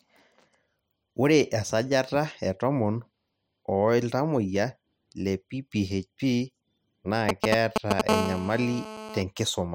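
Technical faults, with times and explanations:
7.29 to 8.01 s: GSM signalling bursts. A nearby 2G phone sends short groups of radio bursts, rectified into galloping 217 Hz buzzes, a little louder than the speech.
8.09 to 9.22 s: GSM phone buzz. During a call the phone transmits 217 times a second, and the rectified pulses make a steady, raspy, harmonic-rich buzz about 5 dB below the speech.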